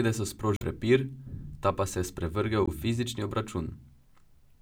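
At 0.54 to 0.63 s and again at 2.65 to 2.69 s, damaged data in the compressed stream makes the decoder lose sync, leaving short glitches in the speech.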